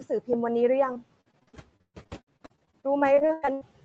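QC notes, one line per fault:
Throughout: noise suppressor artifacts. Background noise is pulled down by about 16 dB frame by frame, so it dips between phrases.
0.93–3.63 s: repeated packet loss (robotic sound). Gaps keep recurring, the longest 121 ms. Each is patched by stretching the last sound, which makes a third of the stretch choppy with pieces missing.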